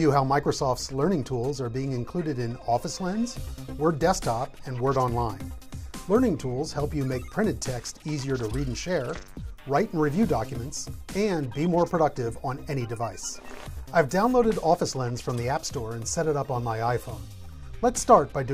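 No technical faults are audible anywhere in the audio.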